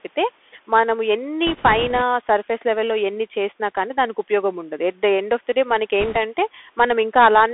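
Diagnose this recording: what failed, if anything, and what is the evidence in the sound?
The speech passed through the Bluetooth CVSD headset codec: a 64 kbps one-bit delta stream whose adaptive step cannot keep up with fast, loud high content. The band runs from 250 Hz to 3.5 kHz, s sounds turn scratchy, and a granular hiss sits under the speech throughout.

Bit errors on the Bluetooth voice link hit from 1.47 to 2.02 s and again from 6.00 to 6.17 s. Each flipped bit nudges the step only slightly and decays, so there are no sharp clicks, just a rushing crackle, noticeably heavier in the second burst.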